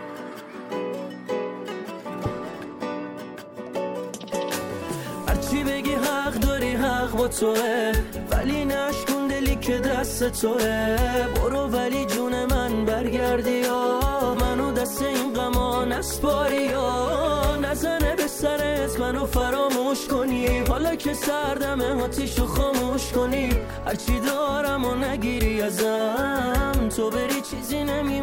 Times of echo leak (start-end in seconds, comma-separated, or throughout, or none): none